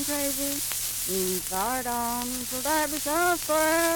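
Nothing technically wrong can be heard in this audio. There is no fault to place at any time and no cause to explain.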